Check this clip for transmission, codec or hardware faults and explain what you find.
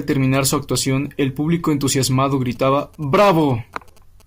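One fault is present, GSM signalling bursts, from 2.32 s to 4.22 s, starting just after "su actuación el público". A galloping dit-dit-dit of short, rasping buzzes runs underneath the speech, faint and roughly 30 dB below it. Each buzz repeats at 217 Hz, the pulse rate of a 2G phone's transmitter. A nearby handset was exchanging signalling bursts with the network, and the audio circuitry rectified that radio energy into sound.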